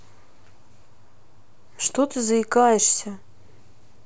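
No technical faults are audible.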